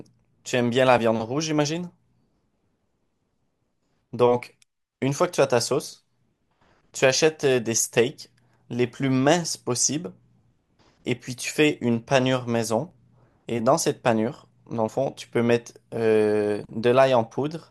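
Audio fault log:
6.93, 10.92, 12.91 and 14.88 s: overlap between stream segments. Four tiny skips fall on a 2-second segment grid. At each boundary, two segments claim the same moment, and the player trims the overlap even though the audio was not repeated. Real speech is lost each time: about 15, 11, 9 and 5 ms. The waveform jumps straight across each gap. So each one is heard as a tiny skip.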